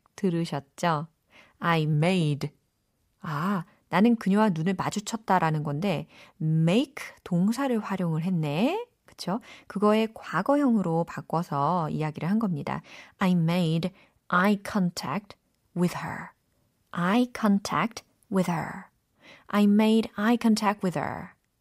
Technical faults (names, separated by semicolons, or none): drift correction step